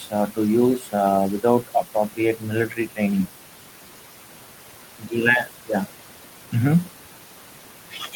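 Noise suppressor artifacts run through the whole recording. The room noise, sitting about 15 dB below the speech, is pulled down by about 12 dB in the gaps and then lifted back under each phrase as the suppressor decides band by band what counts as steady noise.

The first speech cut by the noise suppressor comes from 0.79 to 0.94 s. The suppressor treats a quiet stretch of speech as background and drops it by as much as about 12 dB, so that part sounds swallowed. A second cut follows from 2.68 to 2.98 s, reaching about 11 dB down, and again the soft material fades out with the noise.

At 5.97 s the input switches to a poorer device, likely a change of microphone or a headset profile. There is no gap at the switch. From there to the end, the sound turns duller and more boxy. The level shifts by a few decibels, and a new, faint noise floor sits well below the speech.

A last speech cut from 7.91 to 8.14 s, about 9 dB deep, softens the tail of the final phrase.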